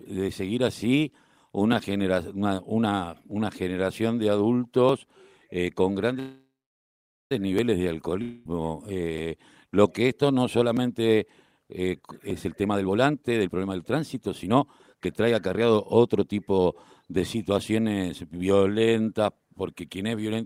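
Regular clicks run through the whole of this speech recording, from about 0.14 s to the end, one roughly every 1.59 s whenever there is signal. The metronomic spacing points to clock drift buffer slips. Two devices on independent clocks likely disagree by something like a thousand parts per million. The buffer between them creeps full or empty until a few dozen samples are skipped or doubled, and each of those jumps breaks the waveform audibly.

At 6.19 s the sound stalls into a buzzy continuation of its last moment that fades away. Close to 0.8 s of the 1.1 s hold is bare silence before the speech resumes at 7.32 s exactly where it left off. That is a call audio freeze. Packets were likely held up in transit and the jitter buffer ran dry, so the receiver stretched the last sound and then waited. Nothing is lost, but the delay grows by about 1.1 s.

From 8.22 to 8.46 s a fading buzz again replaces the speech, this time without a silent stretch. 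When sound returns, roughly 0.23 s of material is gone. This is a short long network dropout: the audio for that span likely never arrived, and the gap was concealed rather than recovered.

Between 12.00 and 17.95 s the speech sounds hurried while its pitch stays unchanged, running at about 119 % speed. This is a jitter buffer speed-up. The buffer had built up more audio than its target, so the receiver repeatedly cut out pitch-period-sized slivers, shedding about a second of delay overall.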